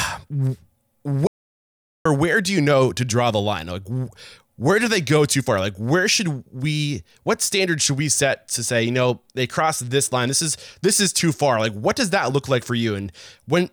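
From 1.27 to 2.05 s the speech drops to complete silence without room tone: an audio dropout to silence, likely an input failure while recording continued.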